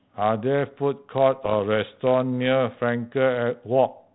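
From 1.44 to 1.54 s, bit errors on an ADPCM link corrupt the speech with pops and rough bursts. Unlike single clicks, each error knocks the decoder's step size and predictor off, so the damage rings on with brief level swings.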